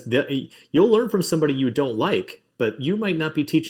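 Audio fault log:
Throughout: channel delay (comb filtering). A lag of under a millisecond, summed to mono, leaves evenly spaced notches from about 700 Hz, unlike an EQ dip's single broad hole.
2.67 to 2.69 s: lost packet rebuilt from error correction. About 20 ms turns briefly rough and noisy with no silence or repetition, which fits a single packet restored from a low-bitrate copy.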